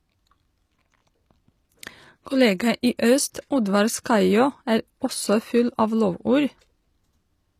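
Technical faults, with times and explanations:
throughout: low-bitrate audio saved at a high bitrate. The speech keeps the smeared, swirly artefacts of a heavy first encoding, likely an HE-AAC pass near 24 kbit/s, later rewritten as a roomy MP3. The spectrogram shows a thin, patchy upper band the bigger file cannot restore.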